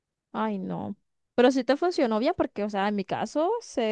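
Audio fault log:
Nothing to log here: I listened to the whole speech clip and didn't catch a single problem.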